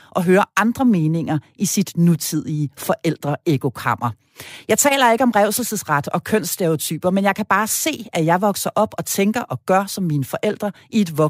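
A corrupt frame decoded at 4.88 to 4.92 s cuts into the speech as a brief chirp, squeak, blip or burst of noise. Flipped bits in roughly two compressed frames were played anyway, so misread gains and codes put energy at wrong frequencies, peaking near -10 dBFS.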